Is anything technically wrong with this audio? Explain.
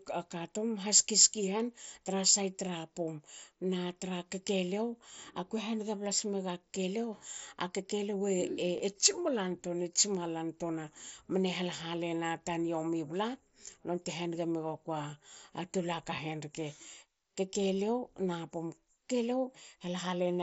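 Yes. Concealed Bluetooth headset packet loss occurs at 8.78 s and at 16.17 s, just after "tol aka". Voice packets dropped, about 15 ms and 7.5 ms, and the receiver filled each gap by repeating matching waveform from just before.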